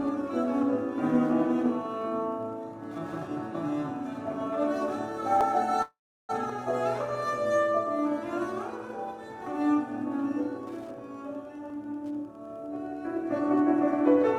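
Wi-Fi interference runs through the whole clip as a faint, steady tick repeating every 102.4 ms, roughly ten times a second, sitting about 40 dB below the sound. A nearby radio's beacon bursts are being rectified by the audio circuit and turned into audible ticks.

A dropped buffer (overrun) at 5.41 s is heard as a jump in the sound. Around a hundredth of a second is missing. The likely cause is that the program did not collect a buffer of samples before the hardware overwrote it, so the surrounding audio was joined directly across the gap.

From 5.82 to 6.31 s there is a call audio freeze. The last sound stretches into a fading buzz or hiss, then about 0.35 s of silence, and the audio resumes exactly where it stopped. Delayed packets likely emptied the jitter buffer, which added a gap of roughly half a second without losing any content.

The same overrun skip returns at 6.50 s, where about 30 ms is missing, and at 11.70 s, where about 20 ms is missing.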